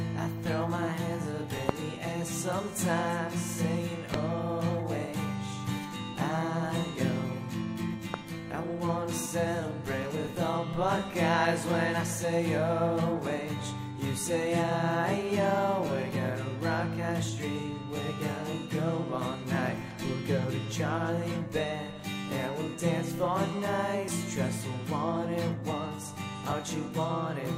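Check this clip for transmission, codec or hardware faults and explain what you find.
Two kinds of fault are present: three loud pops early on and three dropped buffers (overruns) later in the clip.

Loud pops occur at 1.69, 4.14 and 8.14 s, each about 20 ms long and peaking roughly 25, 20 and 15 dB above the signal. Each is a single sharp pulse over continuing sound, likely an electrical transient from a switch, connector or static discharge.

Dropped buffers (overruns) occur at 16.16, 24.08 and 26.52 s, losing around 20, 70 and 20 ms. Unread samples were overwritten, likely from late software reads, and the remaining audio was spliced, giving a forward jump without any silence.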